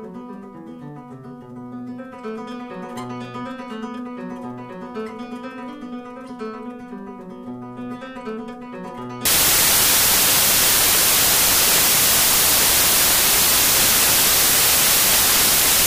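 From 9.25 s to the end, samples built from the wrong bytes turn the audio into loud, harsh broadband noise, unlike added hiss, which sits beneath the sound.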